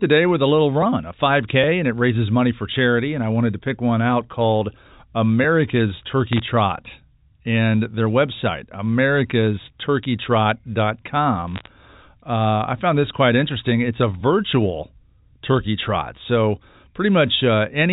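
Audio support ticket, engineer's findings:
Crackle bursts at 6.33 to 6.40 s and 11.48 to 11.68 s: bit errors on a digital phone line. Flipped bits in the G.711 mu-law stream, so individual samples jump and tick sharply over intact speech. Roughly half a percent error rate on the first burst, a few tenths on the longer second one. Codec itself is doing its job, clean cut-off at 4 kHz. Suspect the transmission link, not the endpoints.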